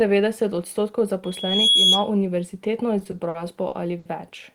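From 1.24 s a thin, piercing tone near 3.3 kHz rises out of the speech, swelling over roughly 0.4 s until it sits about 10 dB above the voice, and holds until 2.10 s. This is loudspeaker feedback squeal: a microphone was hearing the loudspeaker it fed, and at that one frequency the round trip amplified more than it lost, so the tone fed itself and kept growing until the amplifier limited it or the loop was broken.

Between 2.99 s and 4.07 s the speech drags and catches in seven stalls, where the sound briefly freezes and carries on as a held smear before moving forward again, the longest about 70 ms. These repeated stalls (stutter) came from packets arriving late, which repeatedly emptied the receiver's jitter buffer. Each gap was bridged by extending the last sound, about 200 ms in all, roughly a fifth of that stretch, with nothing actually lost.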